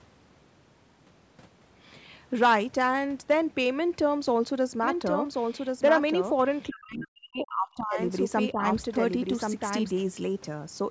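From 4.83 to 9.91 s a doubled audio track appears, likely from a second, slower capture path: an unreverberated copy about a second late and a few dB quieter, starting and stopping abruptly. From 6.69 to 8.0 s, speech suppressed in double talk, likely an echo canceller ducking both sides, drops the voice almost to silence, with a brief, shallower dip at 8.52 s.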